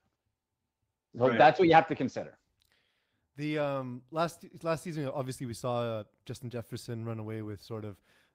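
No technical faults are audible anywhere in the recording.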